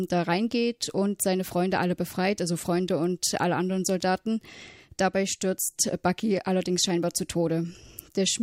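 No dropouts, clicks, distortion or other technical faults are audible anywhere in the speech.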